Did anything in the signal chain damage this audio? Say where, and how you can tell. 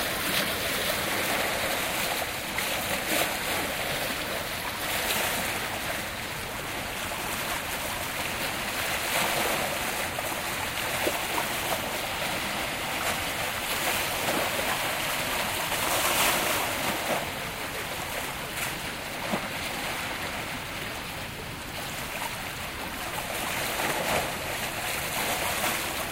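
Yes. Two tiny skips land at 0.42 s and 17.35 s, each removing roughly 16 ms of sound. This is overlap between stream segments at the streaming or playback stage: the 1-second segments' timestamps overlapped, so the player trimmed genuine audio and the waveform jumped.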